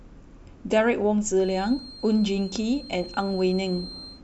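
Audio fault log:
1.34 s to end: feedback whistle. A thin, steady tone at 4.2 kHz sits behind the speech, around 20 dB below it, swelling and fading slowly in level. The likely cause is a loudspeaker-to-microphone loop held just at the edge of feedback, so one frequency keeps ringing without building up. On a spectrogram it shows as a narrow horizontal line at 4.2 kHz running through the speech. On the waveform it adds only a faint fuzz between syllables.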